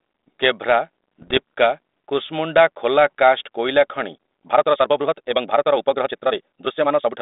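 From 1.22 to 1.37 s there are bit errors on the ADPCM link, about half a percent, knocking the decoder's step size and predictor out, so you get pops and rough, jumpy bursts. At 4.11 s the pace suddenly jumps about 1.73 times faster, rushed with pitch unchanged, likely a time-stretched section running to the end.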